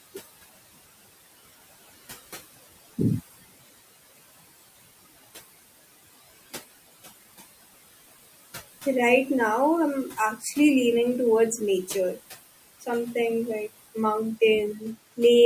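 A speech recording runs through a noise suppressor for its full length, and the processing is audible throughout as noise suppressor artifacts. The room noise, which sits about 17 dB below the speech, is pulled down by about a further 17 dB in the gaps. It then swells back up beneath each phrase as the gain tracks the voice frame by frame. The suppressor also cuts into the speech itself between 10.39 and 10.57 s, after "now I'm" and before "leaning towards nature". Over roughly a tenth of a second within that span, the processor treats low-level speech energy as noise and attenuates it by up to about 11 dB, so that stretch sounds swallowed and faint compared with the surrounding phrase.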